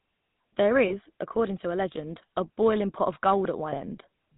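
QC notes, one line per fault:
throughout, GSM full-rate codec: plainly audible damage across the whole speech clip. The voice carries a buzzy, gravelly roughness. The coder rebuilds it from a vocal-tract model driven by regularly spaced pulses and keeps only every third excitation sample, so the fine texture becomes coarse and grainy. Nothing above 4 kHz survives, which leaves the sound dull and band-limited. The character fits a 13 kbps full-rate stream.
0.88–1.10 s and 3.70–3.79 s, lost GSM frames: at each point about 20 ms of signal goes missing, which fits a single lost frame. The decoder fills each gap by repeating the settings of the last good frame. The result is a brief rough, metallic ring rather than a clean dropout. Each loss is short, so the ring ends well before it could fade fully to silence.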